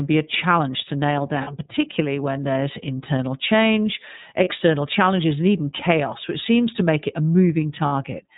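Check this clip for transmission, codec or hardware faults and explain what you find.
The clip has two faults. The iLBC codec colours the whole speech clip, and there are three short dropouts from lost iLBC frames.

The iLBC codec is present from start to finish. It is a narrowband VoIP coder. Each frame's excitation is coded on its own. Nothing above 4 kHz survives, so the speech sounds band-limited and muffled at the top. The coding damage is plainly audible as a rough, slightly synthetic edge. The character fits iLBC's 30 ms frame mode at roughly 13 kbps.

Lost iLBC frames cause three brief gaps. The first is at 1.43 to 1.48 s, after "a challenge to nail" and before "particularly when there's internal". The second is at 4.44 to 4.48 s, after "when there's internal change" and before "challenges and even chaos". The third is at 7.86 to 7.92 s. The first two sound like one missing frame, about 30 ms each. 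The last sounds like two frames, about 60 ms. During each gap the decoder repeats the last pitch cycle mixed with noise. This gives a short held, faintly buzzy vowel. Because the frames are independent, clean decoding returns at once.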